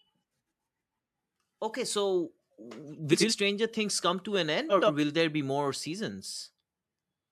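Frames out of order at 3.12–3.32 s and 4.69–4.90 s: two adjacent runs of about 85 ms swapped places, so each stretch plays halves reversed, a garbled flutter.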